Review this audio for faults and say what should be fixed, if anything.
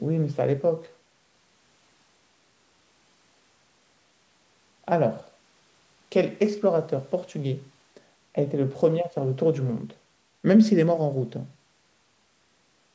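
Nothing here needs fixing: the speech has passed through a call's microphone processing, which trims the lowest bass and leaves no content above 8 kHz, as that path normally does.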